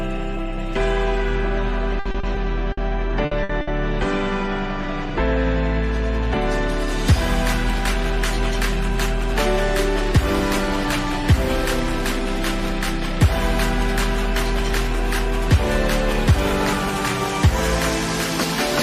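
Between 1.99 and 3.70 s the audio turns choppy with pieces missing, the signature of repeated packet loss (robotic sound). About eight short holes follow one another, the longest near 60 ms. Each is patched by stretching the preceding sound, covering roughly 360 ms in all, while another 180 ms simply drops out. Unlike a single dropout, these fills recur in quick succession rather than leaving clean silence.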